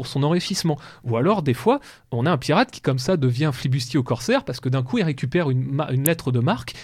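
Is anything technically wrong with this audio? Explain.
Yes, there are two spots where a corrupt frame was decoded in this speech. Around 0.42 to 0.51 s there's a short squeaky burst, spanning what sounds like a handful of frames and fairly loud. At 6.06 s there's a much briefer blip that is much louder than the first. In both spots, damaged bits in the compressed data got played anyway, so misread gains and codes dumped energy at the wrong frequencies for the length of those frames.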